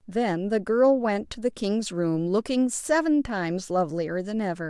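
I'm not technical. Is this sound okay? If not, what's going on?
Yes, nothing wrong with the recording itself turns up anywhere in this speech clip.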